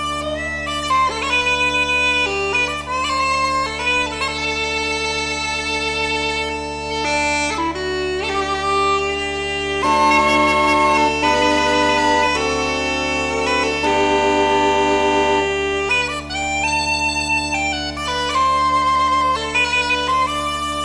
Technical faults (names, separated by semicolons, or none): none